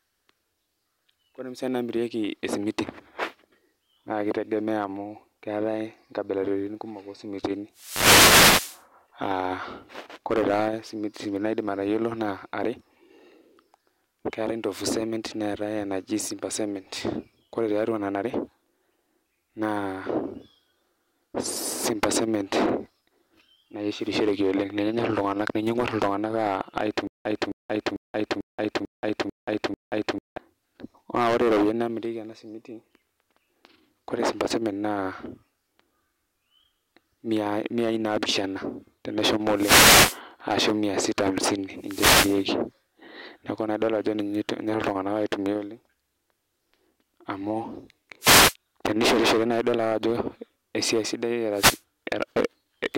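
At 7.74 to 8.84 s the speech is hit by a wireless microphone noise hit, a swish of static as the FM radio link fades through reflection cancellation and receiver noise rises over the voice. The same fault returns at 39.54 to 40.20 s, 41.78 to 42.48 s, 48.20 to 48.55 s and 51.53 to 51.81 s.

From 27.07 to 30.38 s there is a stutter with silent gaps. A 264 ms fragment repeats seven times on a 444 ms cycle, with 180 ms of digital silence between repeats. The likely cause is a stalled player or stream replaying its last buffer on each retry, so the audio due in that span is lost.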